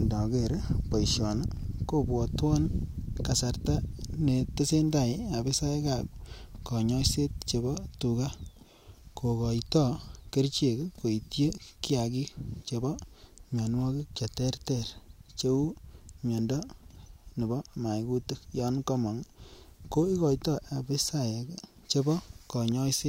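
No faults present in this speech recording: no dropouts, glitches, level jumps or other transport or processing problems at any point.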